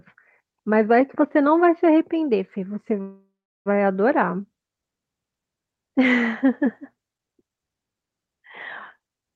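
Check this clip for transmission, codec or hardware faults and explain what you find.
One transmission fault stands out, a call audio freeze in this speech recording, which travelled over a call path with audio band-limited to about 12 kHz. From 3.01 s to 3.68 s the speech stops moving forward. The last sound is stretched into a fading buzz, and then about 0.37 s of near silence follows. The likely cause is a jitter buffer running dry while packets were delayed. When they arrive, speech resumes where it halted. Nothing is lost, but everything after lands roughly 0.64 s late.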